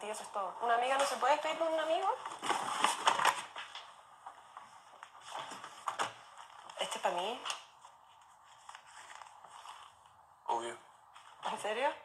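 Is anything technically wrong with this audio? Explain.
Yes. The audio has three kinds of fault.

From 0.55 to 0.57 s there is a skip ahead. A stretch of sound, about 0.7 s long, was dropped while later audio was already queued. This could happen in transit or when an overfull jitter buffer discarded it. No filler was inserted. The two sides are butted together almost directly. So the sound lurches forward with an abrupt seam and a clear piece missing.

From 0.69 to 2.38 s comes a jitter buffer speed-up. The receiver held more audio than its target. That is typical after a burst of late packets arrives together. To shrink the delay, it cut many tiny pitch-period slices in succession. In all, about a tenth of a second was removed. The passage plays roughly 6% faster at unchanged pitch. It sounds slightly rushed.

Repeated buffer faults occur at 3.71 to 3.73 s, 5.76 to 5.78 s and 7.40 to 7.44 s. 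Each time, fresh audio arrived late. The device replayed its last buffer of about 21 ms, which fits a 1024-sample buffer. The first two events repeat once. The third repeats twice. Each repeat meets the next with a hard join. The result is a brief stutter or buzzy click, and the audio that should have played there is lost.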